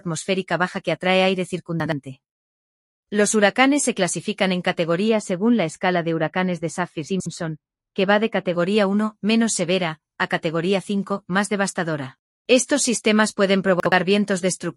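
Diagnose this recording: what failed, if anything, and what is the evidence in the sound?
Chunks out of order, at the network or jitter-buffer stage: at 1.8–1.92 s, 7.08–7.26 s and 13.8–13.92 s the sound jumbles briefly. Blocks of 60 ms play one, two and one places late. Unlike a dropout, nothing goes silent; the audio is only reordered.

De-emphasis applied wrongly, in a playback or call-processing filter: from 5.09 to 8.53 s the sound turns dull and muffled. The treble slopes down smoothly to about 13 dB below 1 kHz at 10 kHz. A low-pass fault would instead cut off abruptly.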